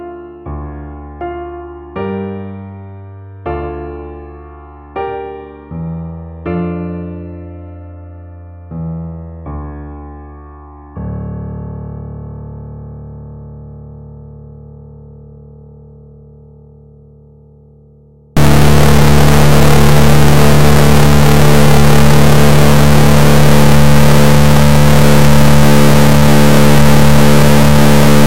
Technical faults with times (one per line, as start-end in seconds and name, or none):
18.37-28.26 stuck bit